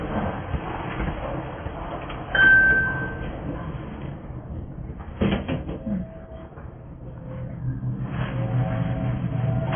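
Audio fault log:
Throughout: AAC compression, heavy, likely from low-bitrate AAC-LC around 16 kbps. Nothing survives above 3.4 kHz, so the sound is dull and smeared with a warbling, fizzy texture; a spectrogram shows a flat ceiling at 3.4 kHz.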